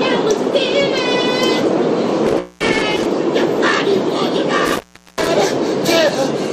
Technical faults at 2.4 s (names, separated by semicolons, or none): intermittent contact; stream segment skipped